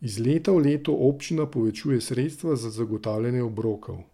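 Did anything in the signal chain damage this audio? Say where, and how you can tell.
No, no damage is audible.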